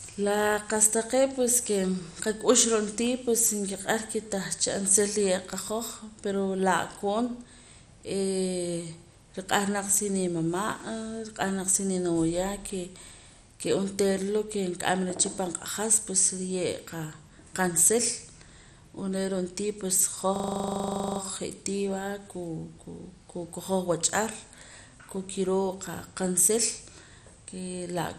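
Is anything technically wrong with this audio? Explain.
Yes, there are two faults in this speech.

MP2 compression, throughout: the audio sounds dull and gurgling, with nothing above 14.9 kHz, likely from MPEG Layer II coding at a low rate, roughly 64 kbps, shutting off upper sub-bands and coarsely quantising the rest.

System hang loop, 20.36 to 21.2 s, just after "unre' ron'tii pues": the system froze while the hardware replayed one 40 ms buffer, producing a steady 25 Hz buzz for about twenty repeats.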